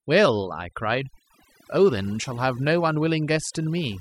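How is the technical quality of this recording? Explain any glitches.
The technical quality is compromised by one fault that runs through the entire speech recording. From start to finish the pauses between phrases fall to an unnatural near-silence scattered with twinkling, warbling specks. That is overdone noise removal: a noise reduction stage set far too aggressively has cut individual frequency bands whenever they came close to its noise estimate. Quieter parts of the voice were removed along with the background noise, and the isolated bands that survived produce the sparkle.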